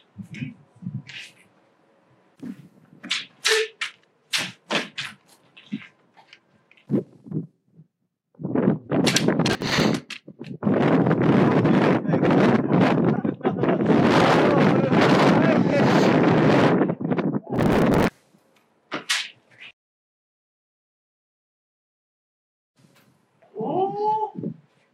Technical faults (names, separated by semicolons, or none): processor overload crackle